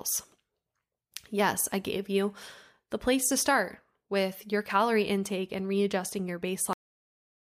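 At 6.73 s, just after "intake and readjusting your", the speech has a cut-off end: the final buffers never reached the output, so the sound stops mid-utterance and falls straight to digital silence without any decay. On a waveform the trace ends abruptly in a flat line; the spectrogram shows a hard vertical edge followed by blank.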